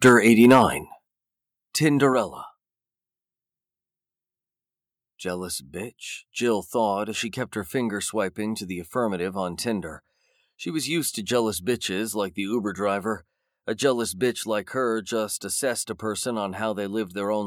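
Speech opens with microphone overload from 0.04 to 0.61 s. Peaks are pushed about 5 dB past the converter's limit, flattening a few percent of samples. That gives the loudest syllables a harsh, crackling edge, most likely from an input gain set too high for the converter. On a waveform the tops appear as flat-topped plateaus, and a spectrogram shows broadband smearing at those peaks. Three microphone volume steps down follow, at 0.09 s (about 2 dB), 1.08 s (about 6 dB) and 2.13 s (about 4 dB). Voice and background drop together each time, likely because the call software reacted to the clipping by lowering the device's input volume. The waveform envelope shrinks in sudden stairs, and the spectrogram darkens evenly across all frequencies at each step.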